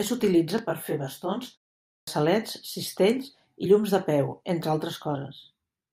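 At 1.9 s, after a pause of 0.41 s, the output device has gone idle and needs time to wake and lock again. This clipped start after a pause costs about 173 ms, so the speech bursts in abruptly with its opening sounds missing.

At 3.65 s, just before "llums de peu entre", and again at 5.14 s, just after "llums de peu entre", compressed frames are skipped. The decoder drops about two frames, consistent with a frame length of 21.3 ms, so roughly 40 ms of audio vanishes. Each time, the audio jumps ahead by that much.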